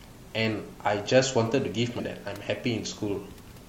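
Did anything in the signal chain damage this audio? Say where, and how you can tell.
Yes. At 1.95 to 2.01 s, damaged data in the compressed stream, at the codec stage, produces a brief glitch about 50 ms long in the speech. Corrupted bytes made the decoder misread those frames, lose sync and hunt for the next valid frame header before recovering. The waveform shows an abrupt discontinuity there. The steady room noise, about 26 dB below the speech, continues past the event.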